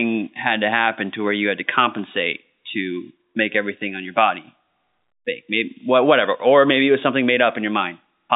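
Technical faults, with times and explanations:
No technical faults can be heard in this speech. It carries the narrow band of G.711 telephone coding, roughly 200 Hz to 3.7 kHz, with at most a faint quantisation hiss that rises and falls with the speech level.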